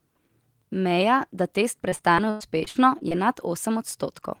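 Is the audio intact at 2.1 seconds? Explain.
No. From 1.89 to 3.13 s there is repeated packet loss (robotic sound): short gaps up to 100 ms are patched by extending the preceding sound, covering about a quarter of the stretch. Speech turns choppy, with pieces missing. A spectrogram shows smeared, repeated frames and breaks.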